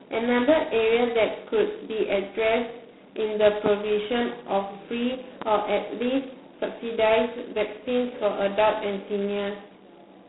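G.726 ADPCM damage runs from start to end. Each sample is coded as a coarse difference from a running prediction, and heavy quantisation points to the 16 kbit/s rate. It leaves a harsh, rasping hiss that rises and falls with the speech, squeezed into a 200 Hz to 3.6 kHz band with nothing above 3.9 kHz.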